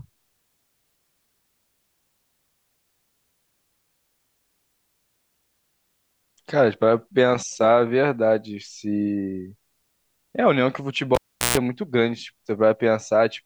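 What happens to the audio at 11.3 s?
A live cable is pulled and plugged back in between 11.15 and 11.58 s. The speech drops out with a pop for about 380 ms, including a 143 ms burst of 60 Hz mains buzz while only the plug tip touches, then pops back.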